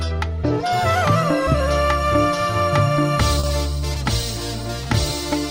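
At about 3.39 to 3.45 s the audio has a short concealed packet loss: roughly 40 ms never arrived, and the receiver bridged it by extending the preceding sound before blending back. Unlike a plain dropout, there is no silent gap, only a brief smeared wobble.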